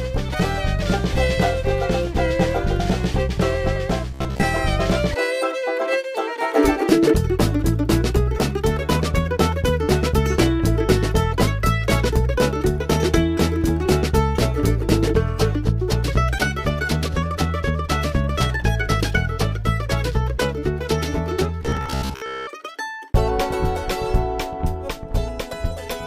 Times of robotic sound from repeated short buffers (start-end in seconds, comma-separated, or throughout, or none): 4.11-4.44, 21.63-22.47